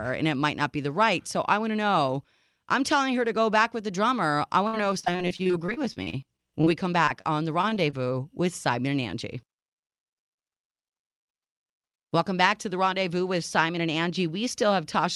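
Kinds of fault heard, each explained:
Repeated packet loss (robotic sound): 4.67–6.68 s and 7.62–7.94 s, packets kept going missing, each hole patched by stretching the previous sound, leaving choppy, robotic stretches.
Short concealed packet loss: 7.05–7.09 s and 7.21–7.26 s, about 20 ms of audio never arrived, and the receiver bridged it by continuing the last sound, causing brief smears.
Jitter buffer speed-up: 9.34–10.62 s, the receiver trimmed short pitch-period pieces, around 50 ms in all, to cut delay, so the speech runs about 3% faster at unchanged pitch.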